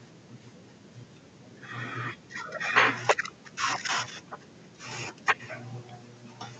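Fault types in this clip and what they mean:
Echo leak: on one side of the call the loudspeaker's output was likely picked up by the microphone and not fully removed by the echo canceller, so part of it was sent back. The result is a faint copy of the speech trailing the original by 212 ms, about 35 to 40 dB below it. It is heard as a longer stretch from 0.12 to 1.57 s and as brief scraps at 3.38–3.42 s, 4.23–4.29 s and 4.46–4.66 s.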